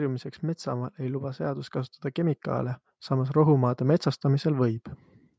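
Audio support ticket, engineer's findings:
Automatic gain rising, 0.41 to 4.87 s. Speech and background noise swell together, about 8 dB overall. Component: call AGC, input judged too quiet, gain stepped up slowly. Waveform: envelope ramps steadily upward, noise floor between phrases lifting with it. Spectrogram: whole band brightens uniformly over time, no spectral shape change. Call mic processing path present, band ends at 8 kHz.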